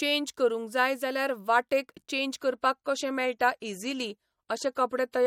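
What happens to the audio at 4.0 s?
At 4.0 s the audio is inside an adaptive stream at a lower bitrate, running from 2.40 s, just after "जाय जाल्यार वाटेक चेन्ज", to the end of the clip. The player switched to a cheaper encoding, and the speech loses its top end abruptly with no gap. Nothing remains above 15.4 kHz, and codec artefacts thicken. The character fits a step down from MP3 at 128 kbit/s to 48 kbit/s.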